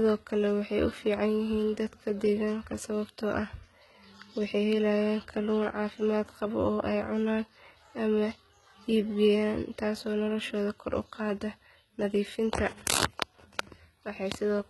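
HE-AAC compression is the likely cause of damage heard throughout this speech. Nothing survives above 11.8 kHz, and the treble is rebuilt by copying lower bands upward, so s sounds turn gritty and lispy. The heavy damage fits a rate near 16 kbps.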